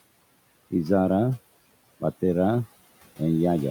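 Nothing in this recording points to a technical fault.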